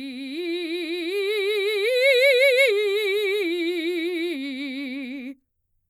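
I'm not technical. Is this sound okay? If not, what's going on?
Yes, the music holds up, with nothing audible going wrong at any point.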